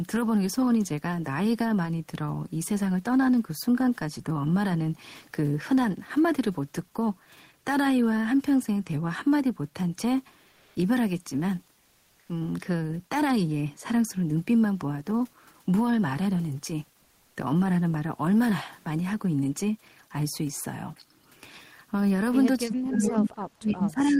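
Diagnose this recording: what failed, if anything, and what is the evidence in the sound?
At 10.49–10.75 s and 17.01–17.35 s, comfort noise replaces the background, probably from call processing. The codec's discontinuous transmission, which fits Opus DTX, stops sending during pauses, and the receiver fills them with synthetic noise. The background sits about 38–40 dB below the loudest speech and drops about 1–2 dB. A spectrogram shows a smooth, textureless band where the real background's detail disappears.

From 22.66 s to the end, the speech is suppressed in double talk. It dips, falling at its deepest by around 30 dB. With both sides talking at once, the echo canceller likely could not tell this talker from loudspeaker echo and attenuated everything. The waveform shows the envelope sinking during the dip.

Between 23.02 and 23.12 s there is an echo leak: a brief copy of the speech arrives 328 ms late, roughly 10 dB below the speech. 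One side's loudspeaker echo canceller likely let part of its microphone pickup return. On a spectrogram, a delayed replica of the harmonic pattern appears.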